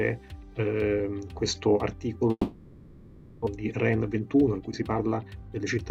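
The audio breaks off at 2.31 s and does not resume properly until 3.48 s. For about 1.15 s the last sound is carried on as a buzzy tail that decays, with a brief stretch of near-silence near the end. Some 940 ms of material is simply gone, with the sound picking up later rather than where it stopped. This is likely a long network dropout, with the receiver concealing the gap and then jumping ahead, its delay shifting by roughly 150 ms. On a spectrogram the detail smears into blurred, fading horizontal bands before a sharp restart. The waveform shows a tapering envelope into a flat gap. From 3.56 s to 5.60 s a jitter buffer speed-up follows: the receiver trims pitch-period-sized slices again and again to shed the extra delay it built up, about a fifth of a second in total. The audio plays about 8% faster at unchanged pitch and sounds hurried. A spectrogram shows harmonics at the same heights but events compressed in time, with small seams where cycles were cut.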